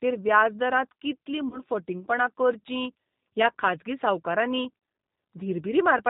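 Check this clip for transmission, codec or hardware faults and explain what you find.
Two faults: the whole clip is coded with G.729 at 8 kbit/s, and two short dropouts are filled in by the codec's packet loss concealment.

Throughout, the G.729 codec is plainly audible. It resynthesises speech from a vocal tract filter, a pitch predictor and sparse pulses per 10 ms frame, and it discards everything above 4 kHz, so the voice sounds band-limited, slightly rough and synthetic.

VoIP packet loss concealed by the speech codec occurs at 1.49 to 1.59 s, after "व्याज दरांत कितलीं" and before "फटींगपणां करचीं ह्या खाजगी", and again at 4.79 to 4.82 s, after "करचीं ह्या खाजगी सावकारांनी". In each case about 30 ms of audio is missing, consistent with a single lost packet. The decoder extends its last pitch and filter state with falling gain, producing a brief, fading smear. At 1.49 s the disturbance persists to 1.59 s because each frame is predicted from the previous one, so recovery takes several frames.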